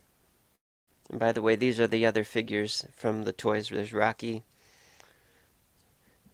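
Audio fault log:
0.55–0.89 s, long network dropout. The last sound is carried on as a fading buzz or hiss, then falls to silence for about 0.3 s. Audio returns with roughly 0.32 s missing. A likely cause is packets that never arrived.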